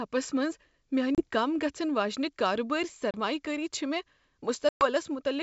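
Packet loss on an ADPCM call cuts hard silent holes at 1.15–1.24 s before "کم گژھن", at 3.11–3.15 s before "کٲری چھےٚ", and at 4.69–4.86 s. The first two each lose about 30 ms, a few packets. The last loses 120 ms, roughly ten packets. The decoder's predictor and step size drift from the sender's. Speech resumes with brief, slight distortion. The G.722 wideband coding at 64 kbit/s adds at most faint damage.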